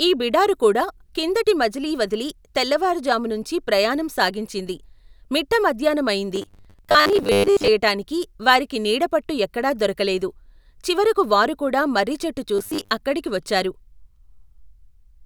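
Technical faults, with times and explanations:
6.36–7.68 s and 12.56–12.91 s (between "దొరకలెదు చివరకు వారుకూడా మర్రిచెట్టు" and "అక్కడికి వచ్చారు"), robotic sound from repeated short buffers: the speech becomes a rigid metallic buzz at 100 Hz, likely from a 10 ms buffer being replayed while new audio arrived late. Roughly half of the first span and most of the second is repeated material in place of real audio.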